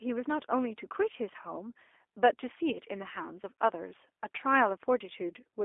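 From start to finish the speech carries G.729 codec damage, plainly audible. The coder rebuilds each 10 ms frame from a vocal tract filter, a pitch predictor and a few pulses, so voices come out rough and slightly synthetic. The band is confined to about 300 Hz to 3.5 kHz, and the roughness fits an 8 kbit/s stream. A spectrogram shows an empty region above 3.5 kHz and smeared, grainy harmonics below it.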